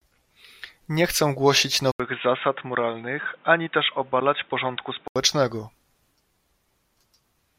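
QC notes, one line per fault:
1.92 to 5.16 s, input switched to a poorer device. An 80 ms gap opens it. The speech then turns dull and boxy, with nothing above 3.8 kHz. It drops a few dB and gains its own faint noise. This likely marks a switch to a narrower microphone.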